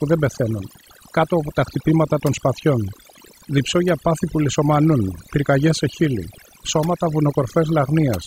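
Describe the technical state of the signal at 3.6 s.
At 3.6 s the signal shows overdone noise removal, present across the whole clip rather than at that moment alone. A noise reduction stage was pushed too hard: any frequency band sitting close to its noise estimate gets pulled far down or switched off, and the softer components of the speech fall below that line too. The background collapses to near silence scattered with twinkling specks.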